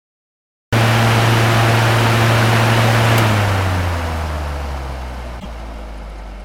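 The capture began late, a cut-off start: the system only started taking in audio after the source was already sounding, so the opening holds digital silence and the sound then enters abruptly at 0.73 s, partway through, with no natural attack or fade-in to lead into it. Later, the clip contains damaged data in a compressed stream: a short run of the encoded data was corrupted, so the decoder could not read those frames correctly and lost its place before finding the next valid frame. From 5.37 to 5.45 s, roughly 90 ms, this is heard as a brief disturbance in the sound.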